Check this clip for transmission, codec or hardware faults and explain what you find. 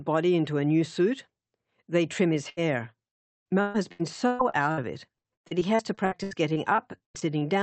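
There is one transmission fault: repeated packet loss, heard as robotic sound. From 2.35 s to 7.43 s, the speech keeps breaking up. About 25 separate gaps follow one another, the longest lasting 134 ms. Each missing packet is patched by extending the previous sound, so roughly a quarter of that stretch is concealment. The result is choppy speech with pieces missing. The audio went through an Opus call path, with a top end near 8 kHz.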